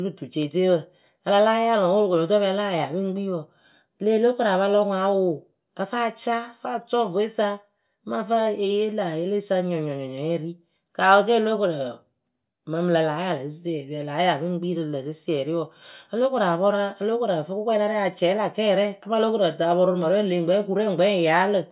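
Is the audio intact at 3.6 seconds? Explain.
Yes, the speech at 3.6 seconds is intact, with no dropout, click, distortion or other audible fault at that moment.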